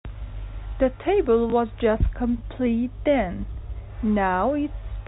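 A speech recording, band-limited to telephone quality with nothing above 4 kHz, has packet loss with the last packet repeated at 1.5 s. One 20 ms packet is replayed, producing a small blip, visible as a duplicated waveform segment.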